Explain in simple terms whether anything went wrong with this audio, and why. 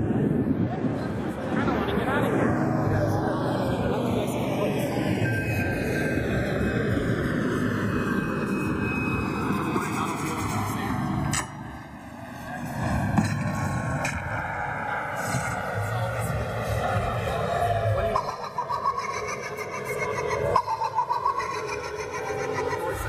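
Channels drifting apart, from start to finish. The left and right sides were recorded by devices keeping slightly different time, so one slowly slips behind, reaching a lag of a couple of thousandths of a second. Mixed together, this produces a slow, swirling flanging sound.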